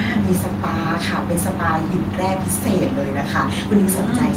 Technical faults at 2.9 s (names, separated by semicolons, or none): none